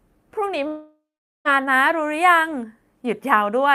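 A long network dropout, likely caused by packets ceasing to arrive for close to a second, starts at 0.67 s and lasts until 1.48 s. With nothing to play, the receiver stretches the last sound it had into a fading buzz that dies away into about 440 ms of silence. Speech resumes at 1.48 s, but around 780 ms of it never arrives, so the sentence jumps ahead rather than picking up where it broke off.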